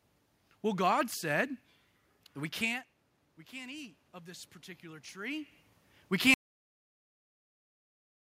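Just after "that we can't we", from 3.49 to 5.6 s, there's automatic gain rising: the input fell about 17 dB, so the AGC slowly added about 5 dB, swelling voice and room noise together. At 6.34 s we get a cut-off end, where the final buffers never made it out, so the speech stops dead into digital silence.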